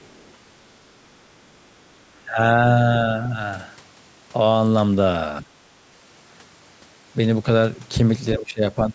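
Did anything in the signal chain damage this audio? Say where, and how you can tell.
Yes. The other side's voice is leaking through at 0.02 to 0.32 s. A faint second voice, roughly 35 dB below the talker, sits under the opening. This happens at the call-processing stage, likely because the echo canceller left loudspeaker pickup in the microphone signal.

Speech is suppressed in double talk at 2.24 to 2.38 s, 5.42 to 5.47 s, 8.37 to 8.62 s and 8.89 to 8.95 s. The talker's level briefly sinks by around 10 to 15 dB. This is also call processing: likely the canceller couldn't separate talker from echo, so it turned both down.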